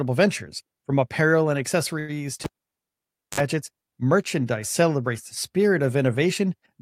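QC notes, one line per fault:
2.44–3.40 s, cable pulled and plugged in: a pop cuts the speech to near silence for 0.91 s. A 56 ms burst of 50 Hz mains buzz follows as only the plug tip makes contact, then a second pop before "merchandise celebrates the spirit".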